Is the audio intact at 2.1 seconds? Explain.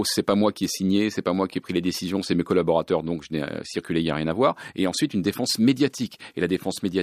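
Yes, the audio is intact at 2.1 seconds, with the speech continuing there without any audible dropout, click, distortion or other fault.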